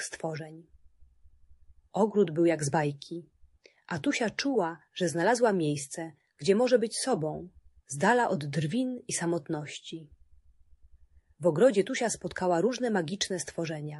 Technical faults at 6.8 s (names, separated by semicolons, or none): MP3 compression